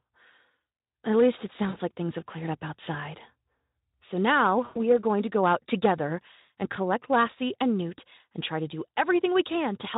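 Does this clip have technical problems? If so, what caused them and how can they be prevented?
Yes: VoIP packet loss concealed by the speech codec at 1.69–1.76 s, 4.65–4.77 s and 6.41–6.48 s, with gaps of about 40, 100 and 60 ms. During each gap the Speex decoder stretches the last pitch and filter into a fading buzzy tone or coloured noise. On a spectrogram this shows as smeared, repeated harmonics, and the waveform shows a decaying envelope. Adding a jitter buffer, forward error correction or redundancy on the network link would prevent it.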